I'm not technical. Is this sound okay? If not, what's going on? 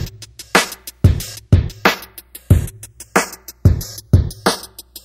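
No. Across the whole clip there is a slow, swirling, whooshing quality, like a jet-plane sweep. This is channels drifting apart: the left and right sides come from devices whose clocks disagree by roughly 50 parts per million, so one side gradually slips behind the other, ending up about a fifth of a millisecond late.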